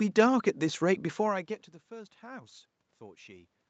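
No technical faults are audible.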